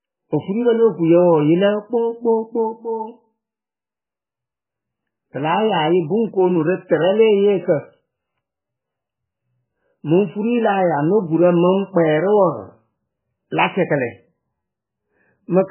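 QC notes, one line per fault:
Throughout, MP3 compression: speech stops at 3 kHz and sounds watery and swirling, likely an MP3 encoder starved near 8 kbps dropping weak lines.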